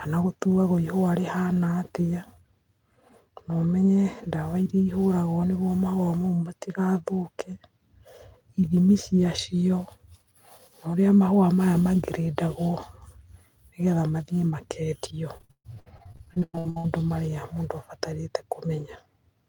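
From 15.37 to 16.86 s, just before "maria mundu", there's repeated packet loss: half that stretch is patched over, gaps up to 132 ms, so it turns choppy with pieces missing.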